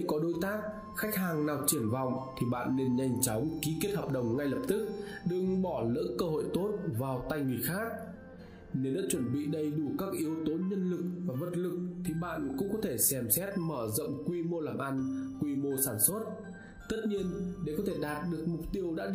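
No technical faults are audible.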